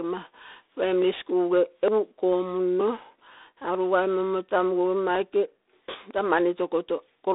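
From the first moment to the end, the speech carries G.726 ADPCM coding at 24 kbit/s. Each sample is sent as a small coded difference from an adaptive prediction, and at this rate the coarse steps produce a harsh, rasping hiss that rises and falls with the speech level. The band runs from about 250 Hz to 3.7 kHz, with nothing above 3.8 kHz. A plain low-pass filter would not add that level-tracking grit.

At 1.02, 1.88, 2.81 and 6.11 s the speech jumps abruptly. This is likely a dropped buffer (overrun): samples were overwritten before being collected, and the audio on either side was spliced together. About 10 ms goes missing at 1.02 and 2.81 s, and about 40 ms at 1.88 and 6.11 s. Unlike a dropout, there is no silent gap, only a skip forward.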